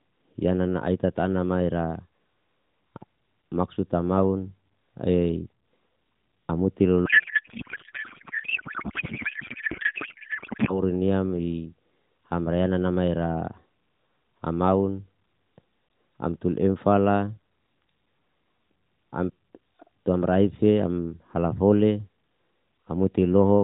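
From 7.1 to 10.8 s the speech gives way to garbled noise and warble that barely tracks it. This is a codec payload misread: octet-aligned AMR narrowband frames were unpacked as bandwidth-efficient, so the decoder took every field from the wrong bits.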